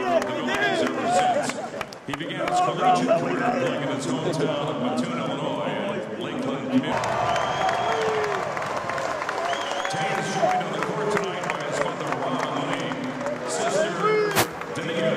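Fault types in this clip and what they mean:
Nothing here calls for a line at all, since there's nothing wrong to be heard anywhere in this one.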